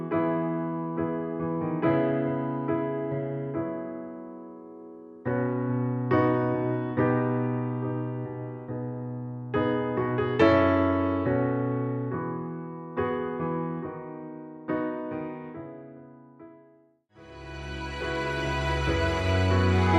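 No technical faults are audible.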